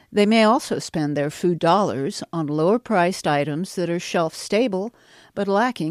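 No technical faults are audible.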